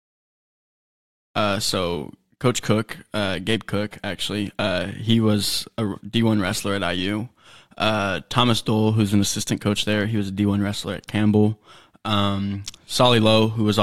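No technical faults can be heard in the speech, and the gentle fade-in at the opening rises smoothly without any click or hard edge.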